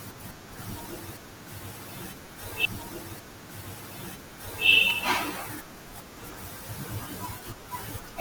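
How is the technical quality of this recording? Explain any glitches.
The speech has two brief glitches, both repeated buffers, at 2.26 s and 4.90 s. Each time, new audio arrived late and the playback device replayed its last block of about 5.3 ms two extra times, which fits a 256-sample buffer. The three identical slices joined hard produce a short click or brief buzz near 190 Hz. Unlike a dropout, there's no silent gap, and essentially no speech goes missing.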